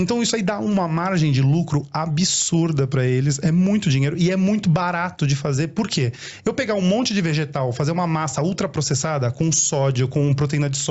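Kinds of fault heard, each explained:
Gain pumping: the level swings by around 10 dB, so loud and soft passages sit close together and the sound is squashed, likely from excessive input gain driving a fast limiter.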